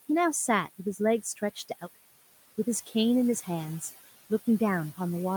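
A short speech clip with noise suppressor artifacts all the way through. The suppressor is pulling the background down by about 15 dB in each band it judges to be steady noise, so the room noise, sitting about 18 dB under the voice, dips in the gaps and swells back under speech. Between 1.23 and 1.83 s there's speech cut by the noise suppressor. It mistook bits of the voice for noise and turned them down with the background, by about 11 dB at the deepest point. Only about a tenth of a second in total is affected, but those moments sound swallowed and faint.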